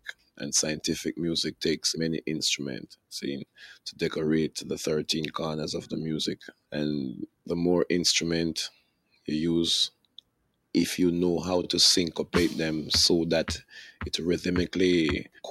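A noise suppressor applied to music or sounds runs throughout. Built for speech, it mistakes steady tones, ambience and decay for noise, pushing the level up and down by around 10 dB, so sustained parts pump and thin while attacks pass.

Sound cut by the noise suppressor occurs at 0.0–0.41 s, 2.84–3.12 s, 3.45–4.01 s, 6.41–6.73 s, 7.27–7.49 s, 8.7–9.28 s, 9.9–10.74 s and 15.25–15.44 s. Here the suppressor treats the sound as noise and drops it by about 21 dB (about 20 dB in the last), so held or fading material sinks and its tail is clipped short.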